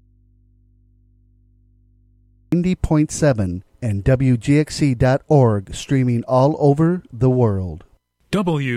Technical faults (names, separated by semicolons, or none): audio dropout to a faint residue